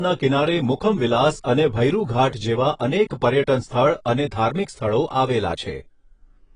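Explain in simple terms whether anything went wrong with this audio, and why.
Yes, something went wrong: the speech sounds dull and heavily smeared from start to finish, with a fizzy, warbling edge on hissy sounds and nothing above 10.5 kHz. That is AAC compression, likely squeezed hard enough that the encoder discarded the top end and coarsened the rest.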